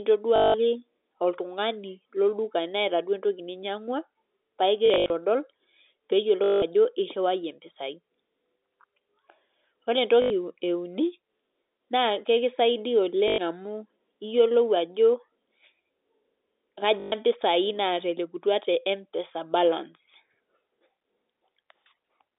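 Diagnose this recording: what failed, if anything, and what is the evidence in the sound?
Network packet loss with last packet repeated: replayed audio fills gaps at 0.36, 4.86, 6.44, 10.22, 13.28 and 17.0 s, buzzing near 50 Hz, which fits 20 ms packets.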